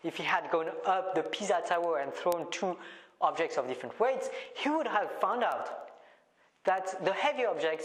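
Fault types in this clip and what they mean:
Word clock ticks: The receiving device runs on its own clock, not locked to the sender's. The two drift about 200 ppm apart, so one sample slips roughly every 0.1 s. This gives a steady train of about 70 sharp ticks from 0.19 s to the end.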